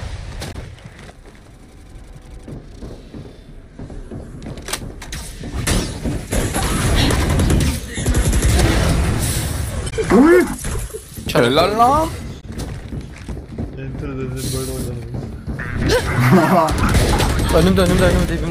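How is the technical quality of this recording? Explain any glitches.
The recording has three brief glitches from damaged data in a compressed stream, at 0.49 to 0.56 s, 9.86 to 9.93 s and 12.37 to 12.44 s. Corrupted bytes made the decoder lose frame sync and search for the next header, so each spot is a short chirp or blip lasting about 70 ms.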